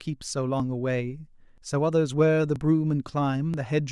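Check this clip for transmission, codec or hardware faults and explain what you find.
There's one problem, repeated: short skips in the speech at 0.60, 1.58, 2.56 and 3.54 s.

Audio missing between chunks: a brief slice, around 20 ms, drops out at each point about once a second, likely lost while one one-second chunk closed and the next opened.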